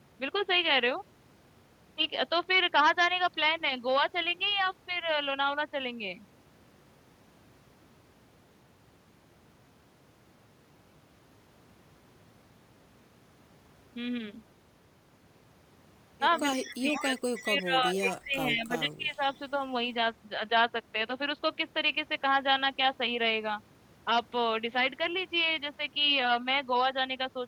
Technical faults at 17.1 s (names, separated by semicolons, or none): speech suppressed in double talk; echo leak